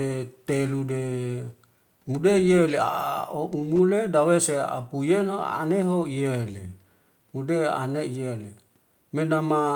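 No technical faults can be heard anywhere in the speech. There is nothing in the recording that needs a time marked or a problem described.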